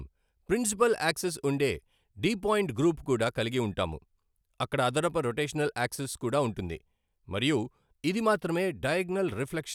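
No technical faults can be heard anywhere in the speech.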